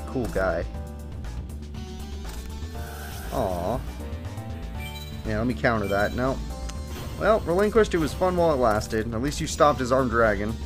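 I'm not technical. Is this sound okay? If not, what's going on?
Yes, this sound is fine. Nothing in it points to a technical problem you need to worry about.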